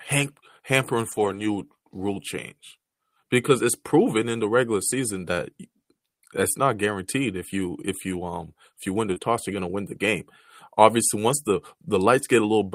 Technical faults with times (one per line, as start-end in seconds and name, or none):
1.11-1.45 lost packet rebuilt from error correction
9.13-9.18 short concealed packet loss
9.16-9.18 lost packet rebuilt from error correction